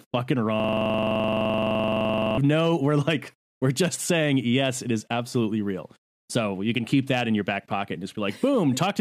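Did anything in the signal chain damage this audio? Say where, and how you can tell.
Yes. From 0.6 to 2.38 s the speech turns into a rapid repeating loop: one 42.67 ms fragment repeats some forty times at 23.4 Hz. This is a system hang loop at the driver or buffer stage. The system froze while the hardware kept replaying its ring buffer, which fits a 2048-sample buffer.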